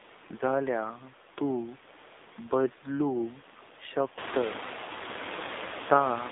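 Throughout the speech, the AMR narrowband mobile codec confines the sound to a telephone band of 250 Hz to 3.7 kHz, with nothing above 3.8 kHz. The plainly buzzy, synthetic texture fits a low bitrate near 7.4 kbps. That texture separates it from simple low-pass filtering, and it turns the room noise rising around 4 s into a swirling warble.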